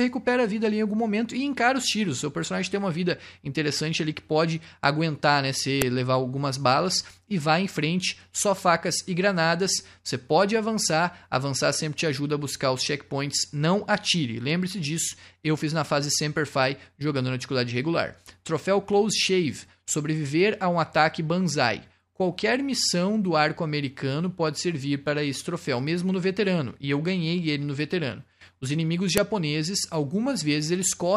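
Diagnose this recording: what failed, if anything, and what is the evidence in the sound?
The fault sits at the storage stage, where separate pieces were joined. There are sharp, loud clicks at 5.82 s and 29.18 s. This is a file header played as audio. Each piece kept its WAV header, and those bytes play back as a brief burst of samples.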